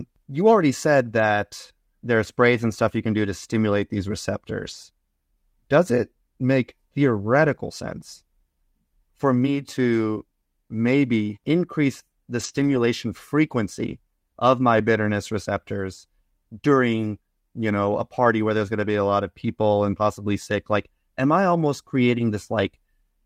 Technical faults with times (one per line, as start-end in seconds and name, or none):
4.67-4.73 lost packet rebuilt from error correction
12.39-12.77 lost packet rebuilt from error correction
14.77 lost packet rebuilt from error correction
18.23 lost packet rebuilt from error correction